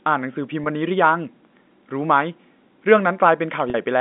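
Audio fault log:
0.64–0.66 s and 3.70–3.74 s, packet loss with pitch repetition: each gap is bridged by a held, slightly buzzy repeat of the sound just before it. The first is brief, about 20 ms. The second, about 40 ms, holds longer and thins as it fades before the sound resumes. Each gap matches one and then two lost 20 ms packets. In each, the receiver looped the last pitch period to cover the missing audio, inside the 200 Hz–3.6 kHz telephone band of the G.711 line.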